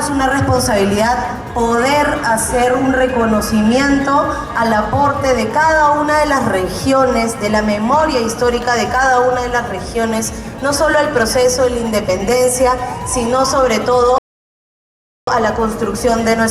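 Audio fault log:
14.18–15.27 s, rebuffering stall: the sound drops to silence for about 1.09 s, then resumes exactly where it stopped, because playback ran short of downloaded audio.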